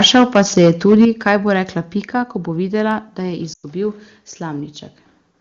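It's a speech clip, and the first stretch, from 0.00 to 1.36 s just before "bo rekla", has a harsh, crackly edge on the peaks, likely microphone overload, with input roughly 8 dB past full scale and several percent of samples flattened. At 0.05 s the level drops by about 2 dB in a single step, which sounds like the software stepping the microphone volume down in reaction to that clipping. Later, from 3.53 to 3.65 s, the sound drops to near silence within two frames, with about 100 ms lost. That's lost AMR speech frames, a run of roughly five, where the decoder keeps reusing the last good frame at falling gain until the stream recovers. The AMR wideband (HD Voice) coding itself, at what sounds like a top-rate 23.85 kbit/s, adds nothing more than a faint trace.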